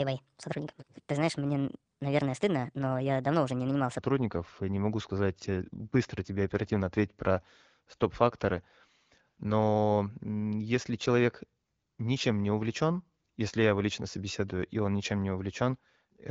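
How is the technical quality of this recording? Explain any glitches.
The recording has one clear glitch, a section at the wrong speed, heard against a band-limited wideband-phone sound with nothing above about 7 kHz. From 0.00 to 3.99 s the speech runs 1.34 times too fast, about five semitones higher, likely from playback on a mismatched clock. Pitch and tempo rise together, which separates it from a pitch shift or time-stretch that changes only one.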